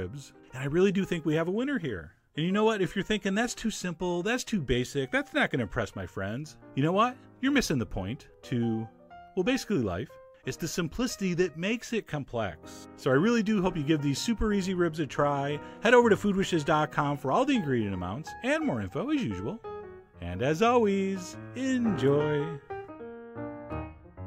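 Nothing goes wrong anywhere in this one; it's just the sound itself with no technical trouble to point out.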